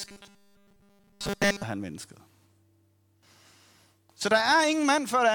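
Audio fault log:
0.01–1.63 s, robotic sound from repeated short buffers: the speech becomes a rigid, metallic buzz locked at 200 Hz, matching a 5 ms segment looped over and over, likely because fresh audio arrived too seldom. Nearly everything heard is repetition, ending just before "han mennesket".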